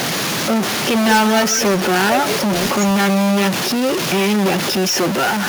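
Throughout, distortion rides on the speech and pauses carry a noise floor, likely from a stuck bit offsetting half the sample values. From 1.01 to 1.87 s an echo leak is heard: a delayed copy about 190 ms behind, roughly 10 dB down, likely from incomplete echo cancellation at a loudspeaker end. From 1.89 to 2.58 s and again from 2.87 to 2.93 s, the speech is suppressed in double talk, dipping by as much as 20 dB and then about 10 dB, likely because the canceller attenuated its own talker along with the loudspeaker echo when they overlapped.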